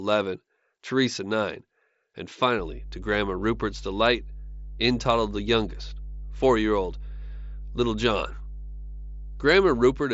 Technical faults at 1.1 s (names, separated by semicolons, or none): none